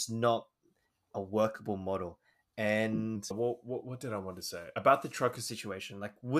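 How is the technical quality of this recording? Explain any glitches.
One playback fault is audible. From 3.16 s to 5.48 s, a wrong sample rate slows the speech to 0.919 speed and lowers pitch about 1.5 semitones, consistent with 48 kHz audio played at 44.1 kHz.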